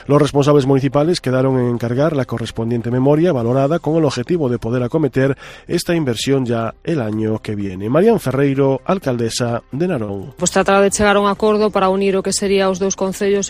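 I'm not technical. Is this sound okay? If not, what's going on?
No. Around 10.04 to 10.10 s there's a brief smear or wobble: short concealed packet loss, where about 40 ms went missing and the receiver patched the gap.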